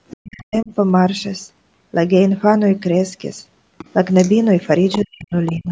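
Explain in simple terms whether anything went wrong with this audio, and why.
Two problems can be heard in this speech recording.

The first is the other side's voice leaking through. A second, fainter voice sneaks in at 0.08 to 0.44 s, 3.78 to 4.32 s, 4.63 to 5.02 s, and briefly at 5.46 to 5.53 s. It sits well below the main talker, a little louder in the 4.63 s stretch. This is likely the far-end caller playing from a loudspeaker. The echo canceller did not fully remove that sound before it reached the microphone.

The second is speech suppressed in double talk. From 0.21 to 0.72 s, and again from 4.98 to 5.71 s, the main voice suddenly drops away. At its deepest it almost vanishes. This is about half a second each time. It happens right when the leaked voice is also present. The likely reason is that both people spoke at once. The echo canceller could not tell them apart, so it turned everything down.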